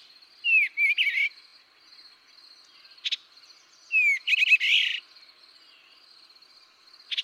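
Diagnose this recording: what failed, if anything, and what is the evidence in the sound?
Repeated frames in the compressed stream, at the codec or storage stage, made the decoder replay audio it had already played. The result is a stutter: a 23.2 ms block, consistent with a single frame, plays twice more at 1.48 to 1.52 s, and a 92.9 ms block plays twice more at 4.33 to 4.52 s.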